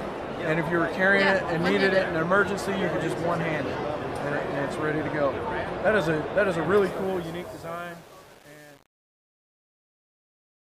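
From 6.86 s to the end at 10.61 s, the fade-out, which starts around 7 s, shows truncation distortion: the level steps down into gritty square-edged stairs, which fits a stage keeping about 7 bits without dither. A smooth fade would stay clean, with no grit, as it vanishes.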